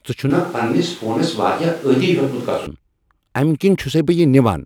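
From 0.30 s to 2.66 s the close microphone likely drops out, and the recording falls back to a distant one. This switch to a distant microphone makes the speech abruptly roomy, hollow and thinner in bass at an unchanged level, with room noise about 25 dB below the speech, before snapping back.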